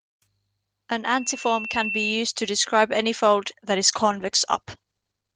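At 1.08 s a loudspeaker feedback squeal kicks in: a steady tone around 2.7 kHz that swells over roughly a second until it's about as loud as the speech, then cuts off at 2.19 s, just before "used to describe any". What's happening is that the mic is hearing the speaker it feeds, and at that one frequency the loop gain tops one, so the tone keeps feeding itself and growing until the loop breaks.

Then at 3.88 s, right after "any fold that is", there's a call bitrate drop that lasts to the end of the clip at 5.35 s. The bandwidth estimate collapsed, and the encoder went from about 48 kbps down to 13 kbps. That's low enough that it codes much more coarsely and trims off the top end, so the speech goes rough, watery and dull for that last second and a half.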